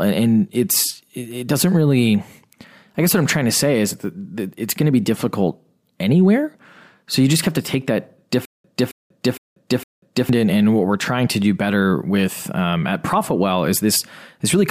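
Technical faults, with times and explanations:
8.45–10.29 s, stutter with silent gaps: a 270 ms fragment repeats four times every 460 ms with 190 ms of silence between, likely a stalled stream replaying its last buffer.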